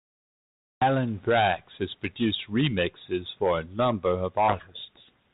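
At 4.48 s the two ends of the link stop agreeing on the bit order of the G.726 code words, a codec payload misread that runs to the end of the clip. The decoder keeps taking each 32 kbit/s ADPCM code word as valid but with its bits reversed, so every difference step it applies is wrong. The speech, carrying only light coding noise until then, is buried under harsh, grinding distortion for the final stretch.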